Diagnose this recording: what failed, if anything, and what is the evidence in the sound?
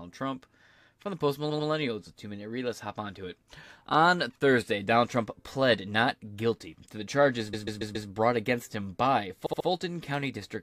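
Repeated frames in the compressed stream: short runs of encoded frames were stored or sent more than once, so the decoder replays them. After "the post", 1.49–1.67 s, a 93 ms block plays two extra times. After "guilty to the charges", 7.53–8.08 s, a 139 ms block repeats four extra times. After "brought against him by", 9.45–9.66 s, a 70 ms block repeats three times. Each is a stutter that lengthens the audio by about 0.19, 0.56 and 0.21 s.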